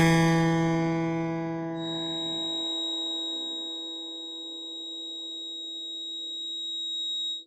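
The music carries Opus compression damage from the start, and it is plainly audible. Tones sound grainy and rough rather than smooth. Upper detail is filled in with noise and folded copies of lower bands, so it lacks true texture. There are few dropouts or swirling holes. The full bandwidth stays open. This grain is likely the music mode of the codec starved of bits, which fits a low rate near 24 kbps.

At 1.72 s a feedback whistle enters and runs to the end. It is a thin, steady tone at 3.8 kHz. It sits only a little below the music. Its level swells and fades slowly but never builds into a howl. The likely cause is a loudspeaker-to-microphone loop held just at the edge of feedback, sustaining that one frequency without running away.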